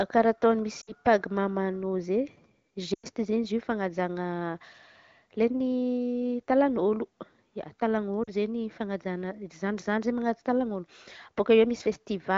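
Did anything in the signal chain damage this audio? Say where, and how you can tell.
Yes. The damage is on the radio link, where lost AMR speech frames were concealed by the AMR-WB decoder. At 0.81 to 0.92 s, 2.94 to 3.06 s and 8.24 to 8.31 s the sound drops to near silence within two frames, then returns briefly weak and rough. The decoder is repeating its last good pitch and vocal tract settings at falling gain. A buffer underrun would instead cut to hard silence with clicks.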